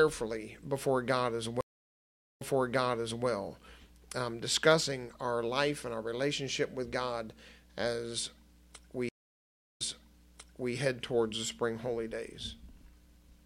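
The audio has two stream reconnects, at 1.61 to 3.26 s and 9.09 to 10.74 s: the connection drops, about 0.77 s and 0.66 s of silence follow, then a fresh decoder picks up, replaying material from roughly 0.89 s and 0.99 s earlier, as the server resent a burst.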